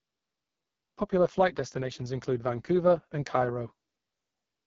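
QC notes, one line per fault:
Throughout, AMR wideband (HD Voice) codec: the speech comes across rough and raspy with heavy coding damage, consistent with a rate around 6.6 kbit/s. The pulse-driven vocal tract model runs short of bits for fine detail. Above 6.4 kHz there is only shaped noise, and nothing at all past 7.4 kHz.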